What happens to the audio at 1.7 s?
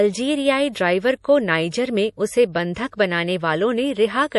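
At 1.70 s there is a pre-echo, a short burst of hiss lasting about 19 ms just before a sharp onset. The codec spreads the quantisation noise meant for the loud attack across its whole block. On a waveform this looks like low-level fuzz ahead of the transient, and on a spectrogram like a broadband smear reaching back from it.

Underneath, the speech carries plainly audible MP3 compression, likely from encoding at a low rate around 48 kbps. Nothing is present above 11.5 kHz, so a spectrogram shows a hard ceiling there, with patchy, flickering high bands that sound watery and make the attack softer.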